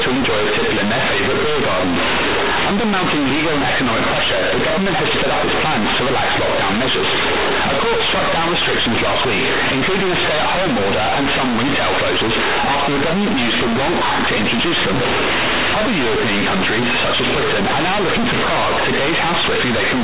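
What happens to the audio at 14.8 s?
At 14.8 s the speech is very loud and harshly buzzy, with heavy noise even in the pauses, as it is throughout. This is companded audio read as linear: A-law G.711 bytes are played back as plain 8-bit samples without expansion, so every sign change swings the output across half its range.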